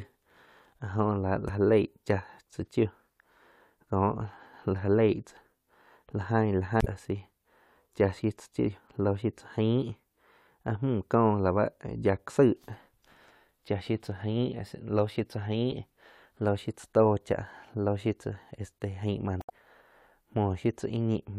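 At 6.78 s, a short burst of damaged data in a compressed stream lasts about 0.09 s. The decoder misreads corrupted frames, loses sync and hunts for the next header. It sounds like a brief glitch in the speech. The same fault recurs at 19.39 s, for about 0.11 s.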